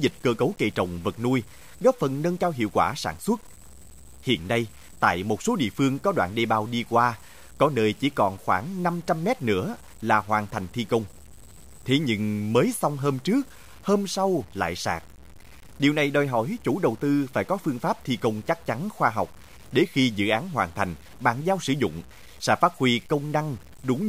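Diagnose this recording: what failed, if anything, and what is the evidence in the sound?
The fault sits at sample-format conversion. Throughout the speech, grainy distortion follows the voice and roughens quiet passages. The error sits roughly 30 dB below the signal. The likely cause is low bit depth without dither: truncation to 8 bits leaves quantisation error that tracks the waveform.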